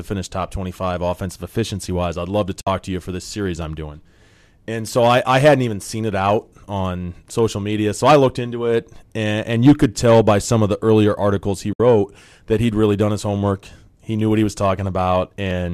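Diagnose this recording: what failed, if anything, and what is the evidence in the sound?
The speech falls into two soft-edged silences: from 2.61 to 2.67 s, between "I'd love to" and "to you for this", and from 11.73 to 11.80 s, just after "the earlier articles he". Each gap fades out and back in. This is AAC frame loss with muting at the codec stage. The decoder zeroed the spectrum of the missing frames, and the overlapping windows softened the edges. Holes of 60 and 70 ms fit six and seven frames of the short, likely low-delay AAC framing.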